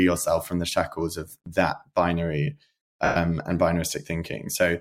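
Right after "shackles of that binary", from about 3.05 to 3.16 s, there's a burst of lost LE Audio frames, roughly 110 ms, which fits about eleven 10 ms LC3 frames. The decoder keeps replaying the last spectrum with scrambled signs and fades it, so the speech smears into noise and fades before the signal resumes.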